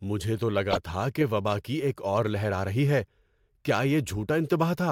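A speech clip with three corrupt frames decoded. Damaged bits reached the decoder, which played the frames anyway and put energy at the wrong frequencies. The worst spans a few frames, 0.71 to 0.78 s, between "مجھے تو" and "تھا کہ وبا کی", peaking loud, near -10 dBFS. A faint one, near -50 dBFS, fills roughly one frame at 2.03 to 2.05 s, before "اور لہر آ رہی". Another faint one comes at 4.49 s.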